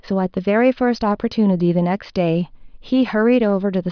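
No technical faults can be heard anywhere in the speech recording.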